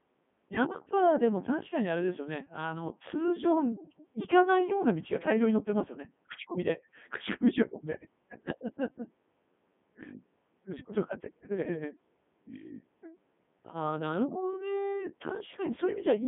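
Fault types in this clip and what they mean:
Codec 2 vocoder: a low-rate digital-radio vocoder that transmits only pitch, voicing decisions, energy and a spectral envelope, then rebuilds the speech from sine waves at the receiver, so the original waveform never survives. Throughout this speech clip the result is buzzy and robotic with heavy damage, consistent with the 3.2 kbit/s mode. The sound sits in a narrow band from 150 Hz to 3.5 kHz, with nothing above 3.7 kHz.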